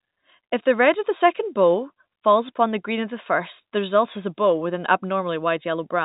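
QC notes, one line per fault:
Speech sits within the G.711 telephone band with nothing above about 3.8 kHz, as that coding dictates, and there is nothing to report.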